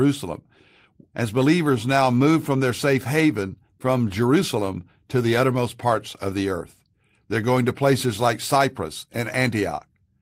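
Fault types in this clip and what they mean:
No technical fault can be heard anywhere in the speech signal.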